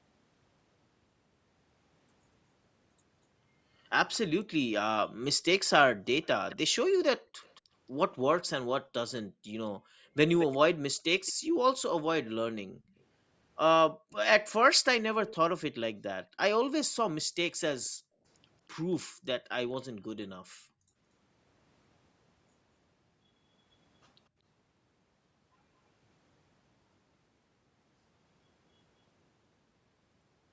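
At 4.14 s a brief, very faint delayed copy of the speech trails it by 0.24 s, likely an echo leak from a far-end loudspeaker that the echo canceller did not fully remove. The same repeat returns from 6.22 to 11.33 s, louder at around 15 dB below the speech with a 0.22 s lag, and again from 12.99 to 15.36 s, roughly 20 dB down and 0.23 s behind. Background gated by the echo canceller appears between 9.27 and 10.04 s, between 13.92 and 14.12 s, and between 16.27 and 20.96 s. In each span the room sound drops by about 38 to 40 dB in brief dips, totalling roughly half a second, a fifth of a second and well under a second respectively, then comes back.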